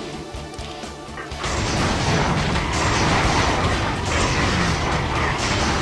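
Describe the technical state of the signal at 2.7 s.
At 2.67 s there is a corrupt frame decoded. A single compressed frame arrived with flipped bits, and the decoder played it anyway. Misread codes or gain values placed energy at frequencies that do not belong to the sound. The result is a brief disturbance, shorter than 20 ms and about one frame long. Its error energy peaks near -25 dBFS, and it is heard as a chirp, squeak, blip or burst of noise.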